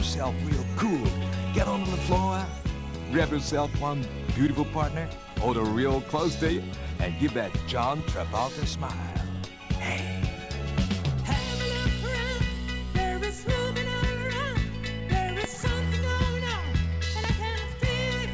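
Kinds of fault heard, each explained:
No kinds of fault are heard in this clip, so there are none to explain.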